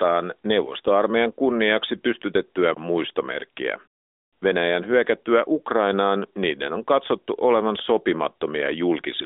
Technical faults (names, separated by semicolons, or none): none